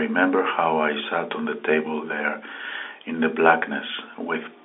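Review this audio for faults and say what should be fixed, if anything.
Nothing stood out on listening to this speech, so there is nothing here that needs fixing.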